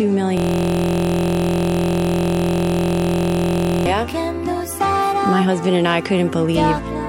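From 0.37 s to 3.86 s the sound freezes into a system hang loop: a single 23.22 ms fragment repeats exactly, about 150 times, producing a steady buzz at 43.1 Hz rather than a stutter. The host or driver stalled while the playback hardware kept cycling its ring buffer, and the loop length fits a 1024-sample buffer. On a waveform, identical cycles tile the span. A spectrogram shows evenly spaced horizontal harmonic lines 43.1 Hz apart.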